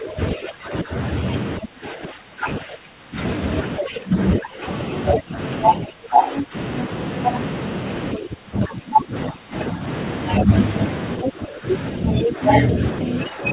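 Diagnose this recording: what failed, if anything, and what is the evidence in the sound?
Speech suppressed in double talk, at the call-processing stage: from 0 to 6.9 s and 8.15 to 13.52 s, the waveform envelope caves in by up to about 20 dB, likely from echo-canceller ducking.

Other side's voice leaking through, at 6.37–6.44, 11.22–11.30 and 12.24–12.54 s, near speech level. A second, overlapping harmonic stack shows on the spectrogram, likely from residual loudspeaker echo.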